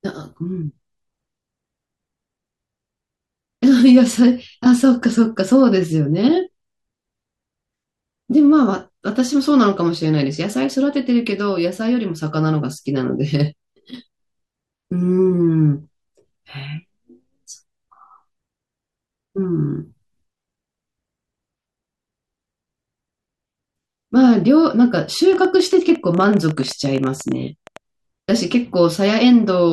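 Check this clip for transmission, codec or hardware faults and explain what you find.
One hardware-type fault appears near the end of this speech clip. From 25.33 to 27.78 s, a train of clicks ticks over the sound: around thirty similar pops at about 12.3 per second, unevenly spaced and roughly as loud as the speech itself. A failing interface or nearby electrical interference is the likely source, injecting repeated pulses into the signal.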